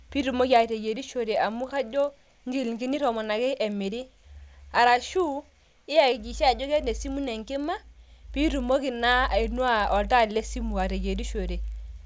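A steady 25 Hz buzz of small ticks rides on the speech throughout and falls silent in pauses. This is the resampler restarted on every block: each 40 ms block was converted alone, consistent with 48 kHz to 16 kHz, leaving an error at every edge.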